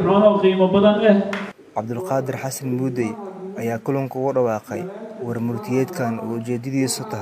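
Nothing in this audio stands out as a technical fault, so there's really nothing to flag here.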